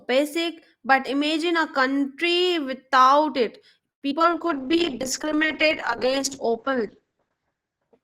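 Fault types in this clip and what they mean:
call audio freeze: At 3.91 s the sound stalls for about 0.1 s and drops to near silence, then carries on from where it stopped, so nothing's lost. That points to delayed packets and a jitter buffer that likely ran dry.
skip ahead: Just after "a country without it", at 4.10 s, playback jumps forward with almost no gap. Roughly 70 ms of audio is gone and the two sides are butted together, as if the buffer dumped a backlog to catch up.
short concealed packet loss: Two quick holes follow right behind, at 4.19 s and 4.22 s, each about 20 ms missing. The receiver patched them by stretching the previous sound and blending back, so you hear a tiny smear or wobble rather than a dropout.
jitter buffer slow-down: From 4.29 to 4.77 s the sound runs at about 90% speed with pitch unchanged, adding about 53 ms. Pitch periods were repeated to rebuild the buffer's reserve, so things feel slightly drawn out, maybe a faint warble.
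call bitrate drop: From 4.38 s to the end the encoder falls from 32 to 9 kbps, holding the low rate for about 2.9 s, and the bandwidth shrinks from 20 kHz to 8 kHz. The result is duller, rougher, somewhat watery sound with the top end cut off.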